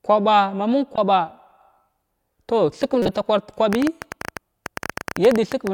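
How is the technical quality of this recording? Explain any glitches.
The recording has two kinds of glitch: damaged codec frames and a burst of clicking near the end.

Corrupt frame decoded occurs twice. The first is at 0.96 to 0.98 s, right after "ma məng". The second is longer, at 3.02 to 3.15 s. In each case the decoder played frames whose data had been damaged. Wrong gains and misread codes put energy at the wrong frequencies. The result is a short chirp, squeak, blip or burst of noise. The first spans what sounds like a couple of frames. The second spans several. Both are loud, peaking around -10 and -5 dBFS.

A train of clicks runs from 3.73 to 5.68 s. It comes at about 12.3 clicks per second at an uneven pace, roughly thirty in all. The clicks share much the same shape. They stand well above the sound, about 10 dB louder. They tick through the pauses as well. The likely cause is interference from nearby equipment or a faulty connection or power supply injecting repeated pulses.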